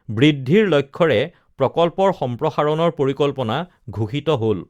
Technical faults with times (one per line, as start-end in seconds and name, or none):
none